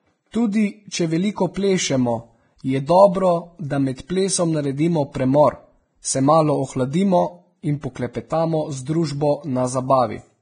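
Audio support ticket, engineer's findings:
Grainy, hissy treble throughout; spectrogram blank above 9.7 kHz, speckled noise in upper bands. Likely Vorbis compression, heavy, consistent with roughly 22 kbps; coarse residue quantisation turns detail into noise.

Pre-echo at 0.31–0.34 s, 1.54–1.56 s, 5.12–5.15 s: 25–31 ms hiss ahead of attacks. Waveform shows noise smear before transient; codec block noise spreads backward.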